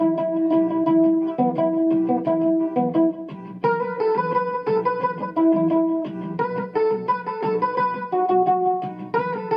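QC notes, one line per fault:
Nothing to flag here; I listened through and didn't hear any faults at all.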